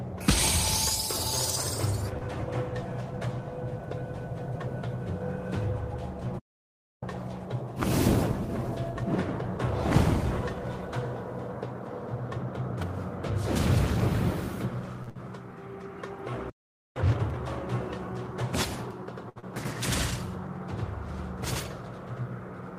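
At 2.17 s one sound is held slightly too long, about 42 ms, before it carries on from the same point. This is a short stall from a late packet. The packet missed its slot, the jitter buffer ran dry, and the receiver stretched the last sound until the packet arrived, so nothing is lost.

From 6.39 to 7.03 s the sound stops dead for about 640 ms mid-flow and then resumes. This is a playback stall, likely caused by the player running out of data or its thread being blocked.

From 7.03 to 10.03 s the audio is hurried, about 1.1 times normal speed, at unchanged pitch. This is time-compressed catch-up: the player trims its backlog by cutting out small pieces and cross-fading across the joins.

At 15.03 s another late-packet stall holds a sound for about 40 ms. Straight after it, from 15.09 to 15.17 s, comes a burst of packet loss. The held sound fades rather than resuming cleanly, and about 60 ms of audio never returns, so playback picks up slightly further on.

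A second playback stall silences the output from 16.50 to 16.96 s, about 460 ms. It is followed by a sharper catch-up from 16.96 to 17.40 s, at double speed, which sounds distinctly rushed.

From 18.91 s to the end, everything is heard twice, the copy arriving about 93 ms later at equal level, like a slap echo. This is channel delay (doubling): one channel lags by a long buffer, which fits a 4096-sample block, before the channels are summed to mono.

Within that, at 19.29 s, a 65 ms late-packet stall holds a sound. Then at 19.40 s a skip ahead jumps forward almost seamlessly, dropping roughly a tenth of a second of audio while later audio was already waiting.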